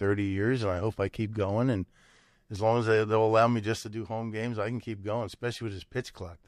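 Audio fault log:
3.83–6.48 s, sudden gain jump: right after "will allow me just" the whole level drops by about 6 dB in a single step and stays down to the end of the clip. The background noise falls right along with the speech, so it's the digital gain changing rather than the talker backing off. There's no fade between the two levels, which points to a gain setting or bit shift that was likely applied instantly instead of being ramped in.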